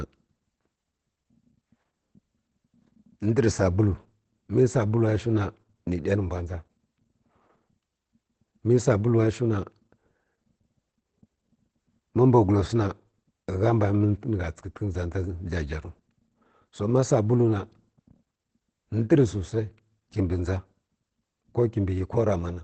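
From start to finish the speech carries Opus voice compression in its linear-prediction SILK mode. Nothing reaches above 8.8 kHz, the wideband ceiling, and the voice comes out muffled, hoarse and faintly robotic, which points to a rate near 12 kbps. Unlike a plain low-pass filter, the damage sits inside the voice itself: the excitation is coded coarsely, so the voice turns hoarse rather than merely dull, without the swirling smear of low-rate MP3.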